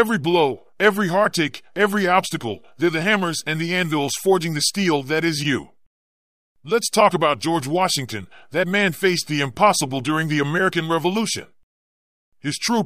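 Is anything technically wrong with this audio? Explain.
No, nothing technically wrong can be heard in this speech recording. The audio stays steady throughout, with no technical problem at any point.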